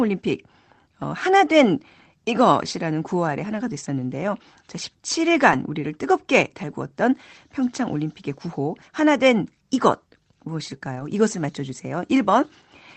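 At 5.51 to 5.61 s and again at 10.95 to 11.01 s, a lost packet was rebuilt from error correction: the decoder replayed lower-bitrate backup copies, so about 60 ms, then 40 ms, sound rougher and noisier rather than dropping out. The waveform shows no gap; the spectrogram shows a briefly smeared, grainier patch below the call path's 8 kHz ceiling.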